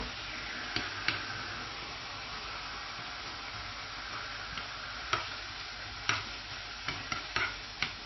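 From start to finish, nothing is heard above about 5.8 kHz. The top end is simply gone, and the sound is dull. The damage is plainly audible. Faint detail flickers in and out, giving a watery, swirling texture. Sharp onsets blur. This is likely MP3 compression at a very low bitrate, around 24 kbps. Starved of bits, the encoder drops the treble and zeroes weak frequency lines frame by frame.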